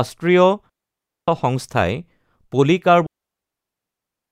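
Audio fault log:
0.70–1.28 s and 3.06 s to the end: digital wireless dropout. The speech vanishes into a clean hole of near silence, about 0.58 s the first time and about 1.26 s the second, which runs out the clip. The receiver mutes behind a very short fade once too much of the radio data goes missing. Unlike an analogue wireless dropout, no hiss or noise burst rushes in around the gaps, and no buzzy concealment fills them.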